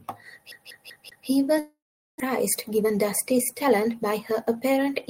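From 0.52 to 1.28 s, the sound sticks like a CD stuck on one turn. The same 0.19 s slice plays four times, with a brief mute at each jump.

From 1.59 to 2.22 s, a fading buzz gives way to 0.4 s of silence. The sound resumes with a gap. This is likely a long network dropout.

From 2.68 to 4.89 s, a jitter buffer speed-up trims short pitch-period pieces. The sound runs 8% fast at unchanged pitch and feels hurried.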